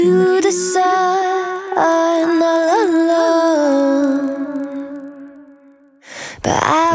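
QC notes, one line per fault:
1.52–6.94 s, resampler restarted on every block: from 1.52 s to the end, regular ticks sit on the sound at 25 per second, one every 40 ms. The rate converter was reset at each block, so at every edge it lacked the neighbouring samples and worked from silence or the wrong end of the block. That leaves a small error at each boundary. The ticks are heard only while signal is present, during a conversion from 48 kHz down to 16 kHz.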